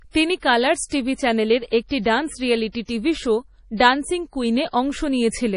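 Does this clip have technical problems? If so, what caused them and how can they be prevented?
Yes. Throughout, likely MP3 compression at a low bitrate near 32 kbps removes everything above 10.6 kHz and flickers weak detail, making the speech watery and dull. Encode at a higher bitrate or use a lossless format.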